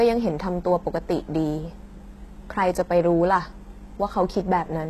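Throughout, the speech has gritty, lispy s sounds and a synthetic-bright treble ending at 12.3 kHz, likely HE-AAC compression rebuilding the top band, which fits a bitrate near 16 kbps.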